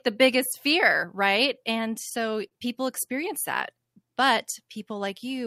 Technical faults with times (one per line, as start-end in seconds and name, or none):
1.91-2.53 repeated stalls (stutter)